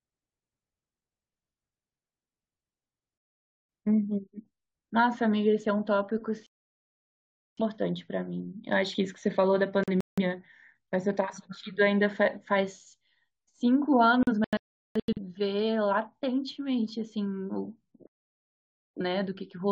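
Digital broadcast dropouts, where the receiver lost valid frames and muted, cut the speech to silence at 3.18–3.69 s, 6.46–7.63 s, 9.84–10.21 s, 14.23–15.19 s and 18.07–19.02 s. The third and fourth break into several short holes. Unlike packet-loss concealment, the gaps are true silence with nothing repeated or smeared over them, and the speech resumes further on, so what was said in between is lost.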